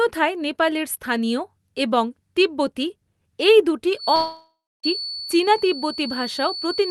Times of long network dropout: 4.15-4.86

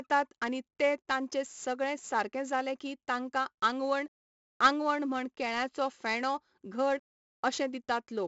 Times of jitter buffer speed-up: none

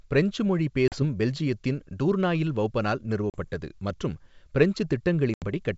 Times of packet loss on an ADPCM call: 0.88-1.03, 3.30-3.44, 5.34-5.46

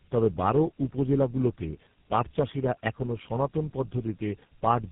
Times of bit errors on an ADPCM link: none

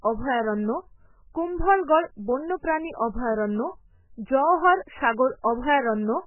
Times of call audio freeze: none

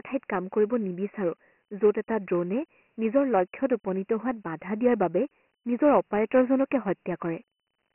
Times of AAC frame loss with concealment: none

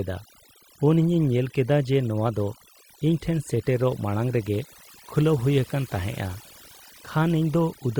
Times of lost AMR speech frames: none

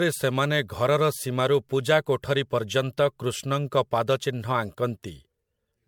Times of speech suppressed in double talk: none

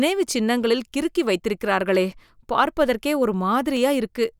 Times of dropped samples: 1.95, 3.77

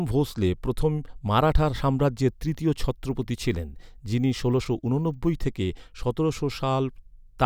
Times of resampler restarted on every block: 2.29-5.33

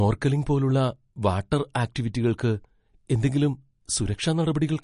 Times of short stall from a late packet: none

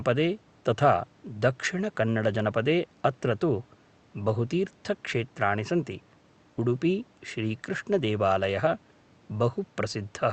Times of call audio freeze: none

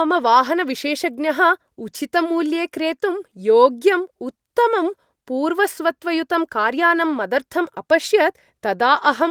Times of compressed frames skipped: none

